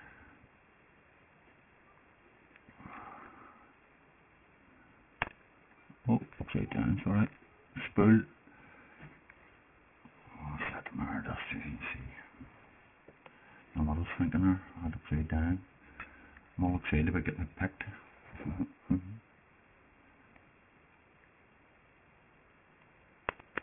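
Aliasing runs throughout the clip. Content above 3 kHz was not filtered out before the rate was lowered, consistent with a drop to a 6 kHz rate, so it folds back as unrelated tones about 15 dB below the signal, giving gritty, metallic highs packed against the band edge.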